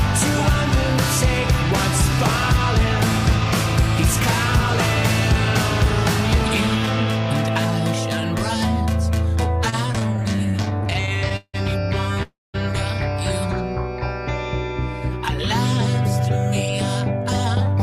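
From 9.70 to 11.56 s the audio shows repeated stalls (stutter). It halts 27 times, and the longest hold lasts 172 ms. Together they add about half a second of filler, roughly a quarter of that stretch. Packets were arriving late or too slowly, so the jitter buffer kept draining. Each time, the receiver extended the last sound, fading it in the longer holds, then carried on. Nothing is lost, but the passage drags and stutters.

At 12.23 s there is a call audio freeze lasting until 12.56 s. The sound stops and the receiver stretches the last fragment into a fading fill. For 210 ms of the 312 ms hold, that fill decays into silence before playback resumes where it stopped. The likely cause is packets held up in transit, emptying the jitter buffer. The 312 ms gap is inserted rather than cut, so nothing is missing and the stream now runs 312 ms later.

From 17.60 s to the end, a jitter buffer speed-up takes place. 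The buffer had built up more audio than its target, so the receiver trimmed short pitch-period segments in quick succession, around 40 ms in total. Playback runs at about 114% of normal speed while the pitch holds steady, so this closing stretch sounds hurried and compressed in time.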